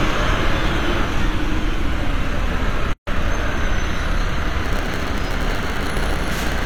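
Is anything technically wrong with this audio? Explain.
Yes, there are two problems.

At 2.93 s there's a gap at a join of encoded pieces: a 140 ms hole, ending at 3.07 s, with smeared edges. The pieces were encoded separately and butted together without trimming each encoder's lead-in delay and final padding, so the sound stops dead, then carries on where it left off.

From 4.64 s to the end there's a block size mismatch with padding. One stage writes shorter blocks than the next reads, and the remainder is zero-filled. That tiny gap in every block gives a 100 Hz buzz, and the sound runs at 0.919 speed, slightly slower but with its timbre intact.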